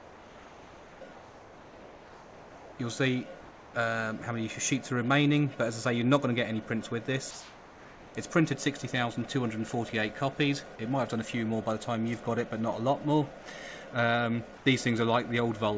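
Comfort noise in place of the background fills the pauses at 0.00–1.01, 1.13–2.78, 3.41–3.74, 7.31–8.15 and 14.57–14.66 s, likely from discontinuous transmission. The real background becomes a steady, featureless hiss about 2–4 dB quieter. A noise gate would leave silence instead.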